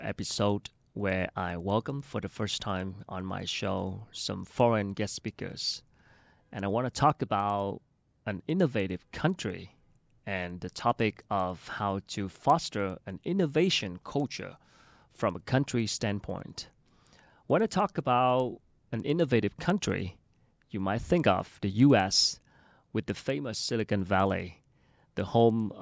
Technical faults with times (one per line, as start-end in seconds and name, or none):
0.00-25.81 resampler restarted on every block